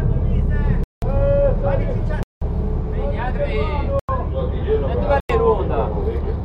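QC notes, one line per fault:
0.84–1.02 s, 2.23–2.42 s, 3.99–4.09 s and 5.20–5.29 s, block of digital silence: the audio drops to silence and returns with no fade, leaving short holes of about 186 ms in the first two and about 93 ms in the last two, which fits missed blocks of 8192 and 4096 samples. On the waveform these are flat lines with vertical edges. On the spectrogram they are blank columns.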